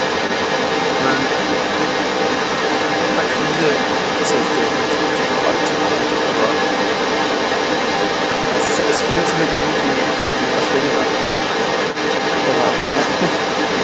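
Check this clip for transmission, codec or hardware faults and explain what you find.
Three kinds of fault are present in this speech: a second voice throughout, a stuttering stretch, and three short freezes. The audio is band-limited at 8 kHz by the call path, which is expected.

The other side's voice is leaking through for the whole clip, at roughly the same level as the main talker. This is likely residual echo that the canceller failed to remove from the loudspeaker's output. On a spectrogram, a second set of harmonic speech traces overlaps the main one.

Repeated stalls (stutter) run from 8.31 to 9.63 s. Late packets emptied the jitter buffer nine times, with gaps of up to 90 ms. About 260 ms, or a fifth of that span, is concealed, so the speech drags and catches. On a spectrogram, harmonics smear horizontally in short repeated bands.

Call audio freezes occur at 10.19 to 10.35 s, 11.21 to 11.42 s and 12.78 to 12.96 s, filled for 140, 190 and 160 ms. 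Each is likely a delivery delay that drained the buffer, so the last sound is stretched into a fading buzz. The speech then resumes with nothing lost. A spectrogram shows a flat, decaying tone patch in each gap.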